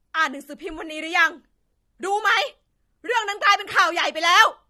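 The speech sounds dull and smeared from start to finish, with a watery, warbling fizz on sibilants and held sounds. This is likely AAC compression: at a low bitrate, consistent with roughly 32 kbps AAC-LC, the encoder trims high frequencies and leaves gaps in the spectrum.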